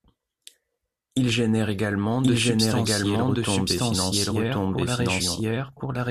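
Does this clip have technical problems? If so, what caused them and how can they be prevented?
Yes. Throughout the speech, every phrase is heard twice: a second, equally loud copy trails the original by about a second, with no fade or room colour, so the two lines overlap and muddle each other. This is a doubled audio track. The likely cause is the same signal reaching the mix twice, either through a second, slower capture path or an edit that left two copies out of step. To prevent it, route each source through one capture path only and check edits for stacked duplicate regions.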